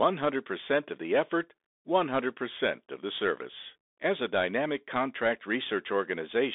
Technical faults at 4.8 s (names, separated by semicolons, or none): Bluetooth CVSD headset codec